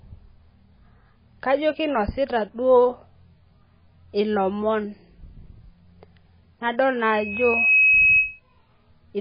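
The speech was likely squeezed through heavy MP3 compression at around 16 kbps, so nothing survives above 5 kHz and the voice sounds dull, watery and swirly throughout. From 7.02 to 8.40 s, a loudspeaker feedback squeal appears as the microphone picks up its own loudspeaker. A 2.6 kHz tone swells over roughly 0.7 seconds to sit about 5 dB above the speech.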